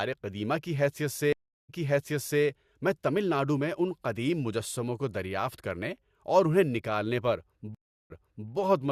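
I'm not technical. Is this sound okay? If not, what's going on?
No. Twice the connection dropped and the player had to restart partway through, a stream reconnect. At 1.33 s, after "قدیمہ کی حیثیت", there's about a third of a second of silence, then the speech resumes 0.74 s earlier, repeating itself before "میں تمل ناڈو میں". At 7.75 s it happens again, with 0.4 s repeated.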